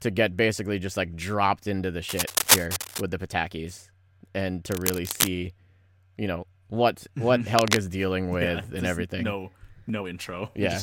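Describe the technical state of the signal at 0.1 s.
At 0.1 s the audio is intact, with no technical fault present at that moment.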